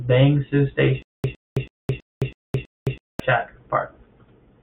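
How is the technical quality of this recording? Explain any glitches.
The recording has one glitch. A stutter with silent gaps runs from 1.02 to 3.20 s. A 110 ms fragment of speech repeats six times, each followed by about 215 ms of dead digital silence, so it returns every 326 ms. The likely cause is a stalled player or stream that replayed its last buffered fragment at each retry before running dry, and the speech that belonged in that span is lost.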